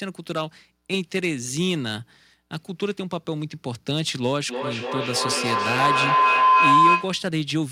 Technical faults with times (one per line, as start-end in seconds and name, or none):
4.49-7.32 feedback howl